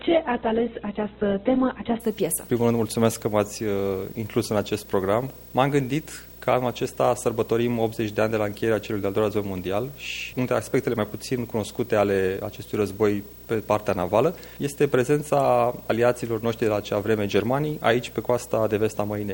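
Right from the top there's a video or display buzz running under the whole clip: a buzz at 59.94 Hz, the field rate of an NTSC-style picture, with gritty hash riding above it and a thin whine at 15.7 kHz, which is the line rate. It sits roughly 20 dB below the sound, so you can hear it throughout. That's a screen or video cable coupling into the audio path, with the picture's scanning leaking straight into the signal. The first two seconds have a separate problem. From 0 to 2.0 s there's nothing above 4.1 kHz, so it sounds dull and a bit smeary, with heavier codec artefacts. At 2.0 s the treble snaps back in with no gap. That's an adaptive stream starting at a low bitrate. The player opened on a very low-rate Opus version, something like 8 kbit/s, so it could start quickly, then switched to a much better one, around 64 kbit/s, once it had measured the connection.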